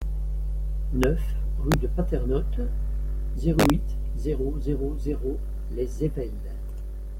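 At 1.04 s the speech gives a sudden hard crack. This is integer overflow. A loud peak ran past the largest value the integer format can hold. Instead of being held at the limit, it wrapped to the opposite sign. The waveform jumps across its full range. It returns from 1.72 to 1.74 s, with the level about 2 dB past the limit. It strikes again from 3.60 to 3.70 s, about 3 dB over. Each crack is far sharper than clipping.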